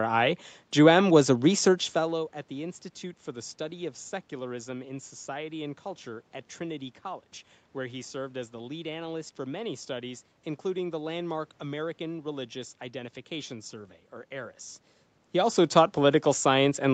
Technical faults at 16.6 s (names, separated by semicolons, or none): none